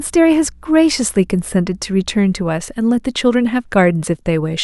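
Mains hum runs from the start to 2.52 s: a steady 60 Hz tone with some low harmonics, sitting roughly 30 dB below the speech. A ground loop or nearby transformer has leaked the power-line frequency into the signal path, leaving a constant low drone beneath the speech.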